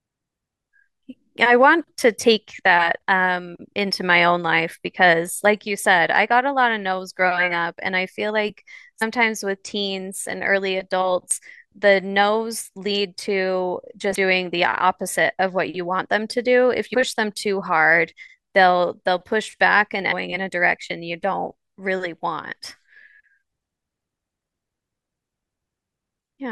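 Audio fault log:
9.01, 11.31, 14.14, 16.93 and 20.11–20.13 s: damaged data in a compressed stream, brief glitches where corrupted frames throw the decoder out of sync until it finds the next frame header.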